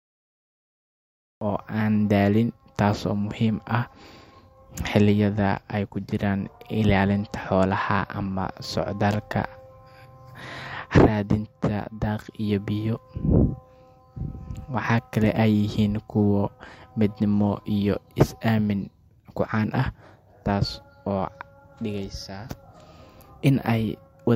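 Speech clip with a cut-off start. The first 1.41 s is digital silence. At 1.41 s the sound begins abruptly, mid-utterance, just before "oo aan daalin taasoo". There is no natural attack or fade-in. The recording or stream began late and caught the speech already underway.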